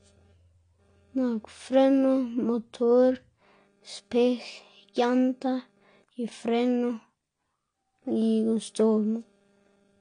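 From start to finish the speech has nothing above 9.8 kHz, so it sounds dull and closed-in, and the remaining band carries a plainly audible smeared, warbling texture. That combination is likely AAC compression, with an AAC-LC encoder quantising each frame's spectrum coarsely to stay within a tight bit budget and discarding the top of the band. The audible damage and the low cut-off fit a bitrate around 32 kbps.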